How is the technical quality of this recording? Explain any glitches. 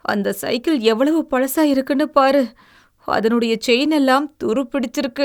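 Nothing goes wrong technically here; the speech comes through without a single glitch worth pointing out.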